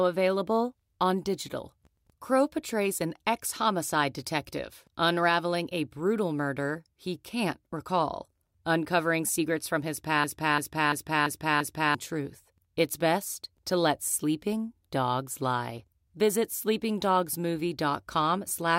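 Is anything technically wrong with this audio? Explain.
Yes. A system hang loop runs from 10.24 to 11.95 s, just after "secrets from his". The system stalled while the hardware replayed one ring buffer. A 341 ms chunk repeats five times at 2.93 Hz, fitting a 16384-sample buffer. About one and a half seconds of audio is lost.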